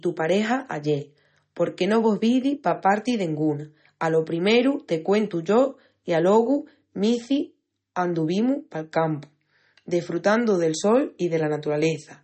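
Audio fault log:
Throughout, MP3 compression: the speech has nothing above 8.4 kHz and a plainly audible watery, swirly texture. This likely comes from an MP3 encoder starved of bits, which fits a bitrate around 32 kbps. It cuts the treble and switches weak frequency lines on and off between frames.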